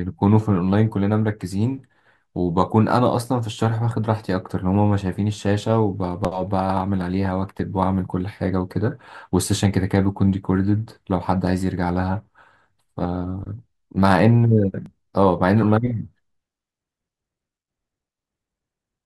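At 6.25, 7.59, 11.47, 13.05 and 14.86 s the speech jumps forward, each time missing about 20 ms, and at 15.63 s a longer skip of roughly 50 ms takes a bigger bite. The likely cause is a dropped buffer (overrun), where incoming samples were overwritten before being collected and the remaining audio was spliced together. Unlike a dropout or underrun, no gap of silence appears; the sound simply skips ahead.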